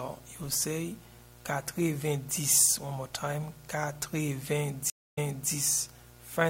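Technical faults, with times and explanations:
Throughout, mains buzz: a steady, raspy 60 Hz buzz roughly 25 dB below the signal. Sharp switching spikes from a dimmer, rectifier or missing shield, twice per mains cycle, produce harmonics of 60 Hz reaching up to several kHz, hence the rasp.
4.90–5.51 s, stream reconnect: the connection dropped, giving 270 ms of silence. The player then reconnected and started a fresh decoder. Playback resumes 340 ms earlier in the material, as the server resent a burst, and the first frame fades in rather than starting abruptly.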